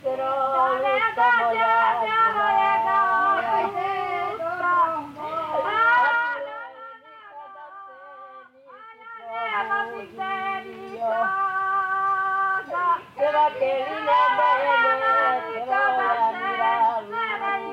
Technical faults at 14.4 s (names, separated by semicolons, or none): none